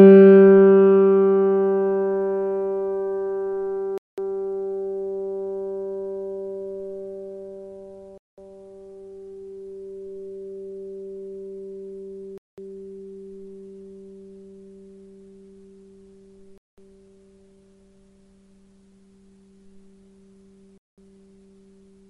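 A gap between chunks leaves 200 ms of silence roughly every 4 seconds, at 3.98, 8.18, 12.38, 16.58 and 20.78 s, cutting the sound with short holes.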